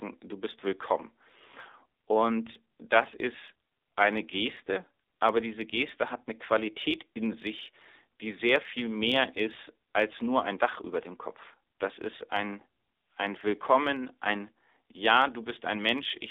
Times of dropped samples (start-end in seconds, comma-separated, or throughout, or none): none